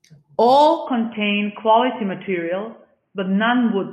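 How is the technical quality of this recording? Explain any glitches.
The recording degrades partway through. From 0.86 s to the end, the speech turns dull and boxy, with nothing above 3.3 kHz and a faint new background noise far below the signal. This is most likely an input switched to a poorer device: a narrower-band microphone or headset profile took over. Level holds steady and there is no gap at the switch. The changed noise floor alongside the band limit distinguishes it from a simple low-pass filter or EQ change.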